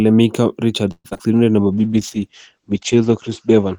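From 0.91 to 1.13 s the speech stream likely stopped arriving for a long network dropout. The receiver extends the last sound as a fading buzz for about 0.2 s, then about 50 ms of silence follows, and when audio resumes roughly 60 ms of speech is gone.

Right after, at 1.13 to 1.17 s and again at 1.17 to 1.21 s, two short concealed packet losses occur. Packets missed the decoder, so it patched each gap with a predicted continuation of the preceding sound. Both come across as a brief smear or wobble before the real speech blends back in.

From 1.28 to 1.76 s a jitter buffer slow-down sets in. Its reserve was low or its target delay had just risen, so the receiver repeated single pitch periods and bits of pauses to stretch the audio by 83 ms. For that half second speech plays at 84% speed with unchanged pitch, sounding drawn out.

At 1.74 s a call bitrate drop begins and lasts to the end. 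The bandwidth estimate fell and the encoder went from 48 to 10 kbps, holding its lowest rate for about 1.2 s. Its audio band shrank from 20 kHz to 8 kHz, so the speech turns muffled, rough and watery.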